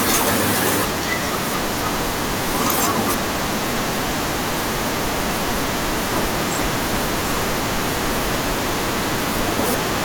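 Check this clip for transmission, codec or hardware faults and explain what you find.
One fault is present, near the end of the speech. From 9.01 to 9.04 s, chunks play out of order: a 10.67 ms chunk arrived one chunk late and plays after its successor. Nothing goes missing, so unlike a dropout there is no silent gap. Instead, three hard joins make a brief jumbled moment.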